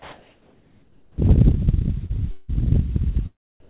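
From the start to 1.18 s, the background is a steady, featureless hiss. It sits about 37 dB below the loudest sound and is about 1 dB quieter than the real background that follows. This is comfort noise in place of the background. The likely cause is discontinuous transmission. The sender stopped sending during the pause, and the receiver played synthetic noise with only the rough shape of the room sound.

At 1.12 s the sound begins too suddenly. Its first 60 ms are missing. Its soft beginning is replaced by the same flat hiss, up to 1.18 s. This is an onset clipped by the voice detector. The detector was likely slow to notice that sound had resumed, so the first moment was never sent.

At 2.06 s there is a brief smear lasting until 2.11 s. This is short concealed packet loss. About 40 ms of audio arrived too late for the decoder. The receiver filled 33 ms of it by stretching the previous sound, then blended back into the real audio. 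The result is a short wobble rather than a clean gap.

From 2.31 to 2.50 s, the last sound is drawn out and fades, never dropping to silence. The audio then resumes slightly further on. This is a long network dropout. About 180 ms likely never arrived, and 170 ms of it was filled by extending the last sound. Some of the original sound is gone for good.

From 3.60 to 3.68 s, the flat comfort noise returns for 82 ms. It is about 36 dB below the loudest sound and about 2 dB quieter than the real background. All of this passes through a G.711 call path, and nothing is audible above 4 kHz.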